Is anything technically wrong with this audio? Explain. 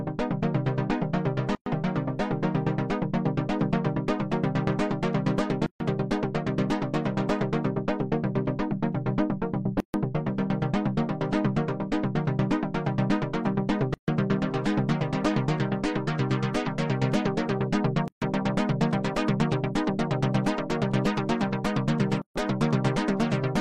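Yes. A gap at a join of encoded pieces appears at 1.55, 5.66, 9.80, 13.94, 18.08 and 22.22 s, roughly every 4 seconds. Separately encoded segments were butted together untrimmed, leaving encoder delay and padding as silences of about 113 ms, then 139 ms, before the sound resumes.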